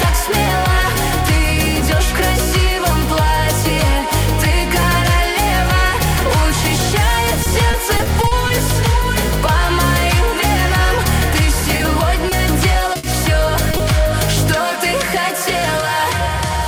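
Dropped buffer (overrun) at 4.82 s: a small forward jump, likely from samples overwritten before being read, losing a few milliseconds.

Repeated packet loss (robotic sound) from 7.43 to 8.51 s: seven gaps, each up to 40 ms, patched by extending prior sound, about 160 ms in all, giving choppy texture.

Short concealed packet loss at 11.77, 12.29 and 12.93 s: each 20 ms hole is filled by continuing the preceding sound, heard as a brief smear or wobble.

Burst of packet loss from 12.97 to 13.05 s: 60 ms never arrived, so the last sound is held and faded as a buzz or hiss before playback resumes further on.

Short concealed packet loss returns at 13.71 and 13.77 s, two more 20 ms patches close together, heard as quick wobbles.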